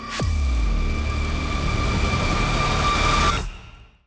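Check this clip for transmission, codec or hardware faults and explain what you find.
There's one fault, and it runs the whole way through. The resampler is restarted on every block: each 50 ms chunk is converted on its own, so its edges see the wrong neighbouring samples. That leaves a small error at every boundary, heard as a steady 20 Hz ticking whenever there's signal. The conversion was from 44.1 kHz to 16 kHz.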